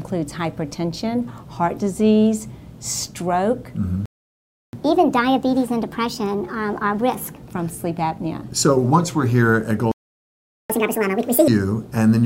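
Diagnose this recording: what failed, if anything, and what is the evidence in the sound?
Playback stall at the player, at 4.06 s for 0.68 s and 9.92 s for 0.78 s: sound drops to silence, likely a buffer running dry.

Catch-up at higher speed, still playback: after each stall it resamples faster, 1.25× from 4.73 to 7.43 s, then 2× from 10.70 to 11.48 s, pitch jumping audibly.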